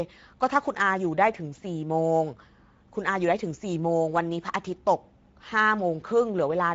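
It's a speech recording carrying Speex codec damage the whole way through, and it's plainly audible: the voice sounds grainy and a bit hoarse, because the codec's excitation is coarsely coded. Nothing comes through above about 7.7 kHz, which fits a wideband setting around 16.8 kbps.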